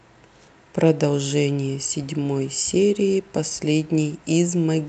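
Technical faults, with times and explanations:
No technical faults can be heard in this speech.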